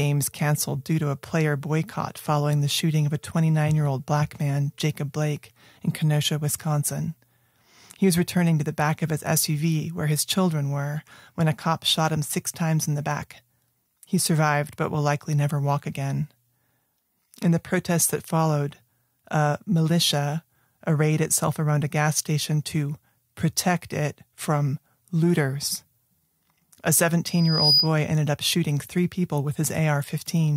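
A thin, piercing tone near 4.9 kHz swells up over roughly 0.4 seconds from 27.27 s to 27.93 s, ending up a few decibels louder than the speech. This is loudspeaker feedback squeal: the microphone picked up its own loudspeaker, and at that frequency the loop gain exceeded one.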